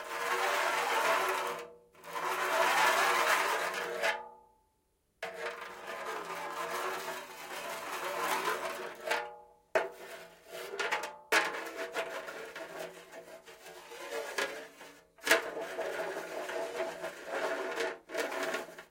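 From 16.50 to 17.95 s, channel delay (comb filtering) appears. One channel runs late by a tiny fraction of a millisecond, which fits a one-sample offset. Summed to mono, the first cancellation sits near 20 kHz. The top end sounds slightly dulled.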